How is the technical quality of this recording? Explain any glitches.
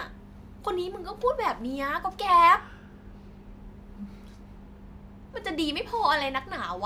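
No glitches or technical faults can be heard anywhere in the recording.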